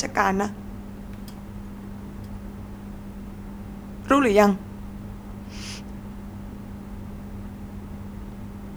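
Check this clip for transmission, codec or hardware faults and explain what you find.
Listening through the speech, I find nothing attributable to transmission, codec or hardware problems. There is no fault to describe or explain.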